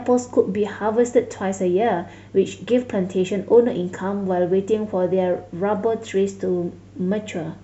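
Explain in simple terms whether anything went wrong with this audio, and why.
Faint, evenly spaced ticks run from 0.18 to 7.62 s, roughly five per second. These are clock slip clicks, likely from two mismatched device clocks. The steady rhythm and silent pauses set them apart from random crackle.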